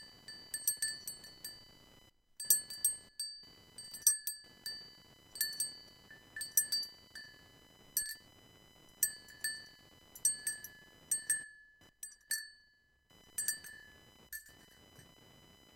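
From start to finish, a computer activity noise sits under these sounds: a buzzing, chirping layer pulsing at around 1 kHz, roughly 25 dB below the material. Load changes in the processor, graphics card or mouse are disturbing the shared ground of the audio circuit. Unlike mains hum, which holds steady at 50 or 60 Hz and its harmonics, this noise shifts with the computer's workload and ignores the recorded sound entirely.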